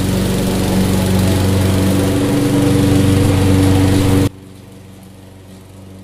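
From 4.27 s to the end, the sound falls about 24 dB. Likely cause: one channel inverted, so shared content cancels in the mono sum.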